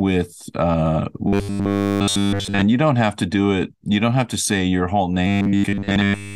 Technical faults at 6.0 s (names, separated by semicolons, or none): robotic sound from repeated short buffers